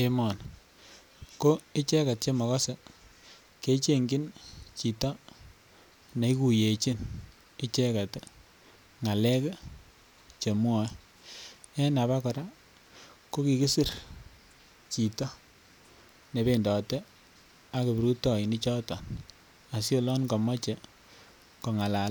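No technical faults can be heard anywhere in the recording.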